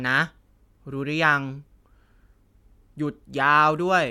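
No audible faults are present anywhere in the speech.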